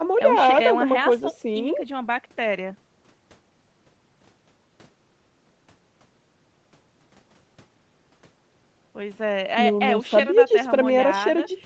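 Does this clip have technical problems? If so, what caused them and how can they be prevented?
No, there's nothing wrong here; it's speech that has been through ordinary call processing and an Opus call connection, which is why nothing reaches above 8 kHz, and that's just how a call sounds, so there's nothing to prevent.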